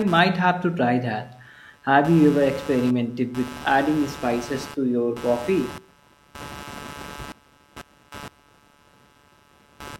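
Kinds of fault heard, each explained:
Computer activity noise: a buzzing, chirping layer pulsing at roughly 150 Hz, sitting about 20 dB below the speech and present throughout. It follows load changes coupling into the shared audio ground, not the voice. On a spectrogram it appears as evenly spaced vertical striations across the whole clip.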